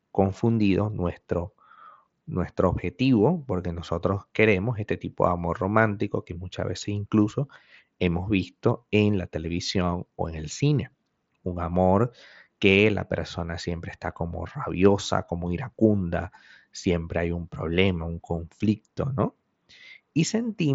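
No technical faults can be heard anywhere in the speech. It comes over the Bluetooth mSBC headset codec, so nothing reaches above about 7.7 kHz, and loud sounds carry a light graininess from the coding.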